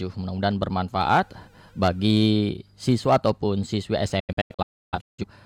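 From 4.20 to 5.24 s the speech breaks into several short silent holes, each cut by a quick fade of about 8 ms. About 0.73 s of audio is lost, and the longest hole is 0.30 s. This is a digital broadcast dropout: the receiver muted whenever frames arrived corrupt or missing.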